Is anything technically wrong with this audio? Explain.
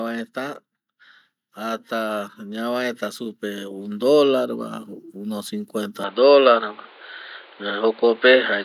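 Yes, there are two faults in this speech clip.

Automatic gain rising, from 1.4 s to 4.59 s, ending just before "va uno". The gain control judged the input too quiet and kept raising its amplification over about three seconds, adding about 6 dB in total. Because the whole signal passes through the same gain, the voice and the background noise swell together, so the room seems to creep closer rather than the speaker simply getting louder.

From 6.04 s to the end, the sound abruptly turns dull and boxy, with nothing above 4.7 kHz. There is no gap at the change, and the loudness stays roughly the same, but a new noise floor appears, around 30 dB below the voice. This is likely an input switched to a poorer device, such as a second microphone or a headset's call profile. That kind of input passes a narrower band and adds its own noise.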